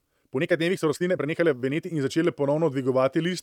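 From 0.0 to 2.0 s the speech runs at about 1.49 times normal pace with its pitch unchanged, then drops abruptly to normal speed for the rest of the clip. This is a time-stretched section, and the likely cause is software squeezing the audio to fit a shorter length by discarding short slices and splicing the remainder together to preserve pitch. Those splices make the passage sound hurried.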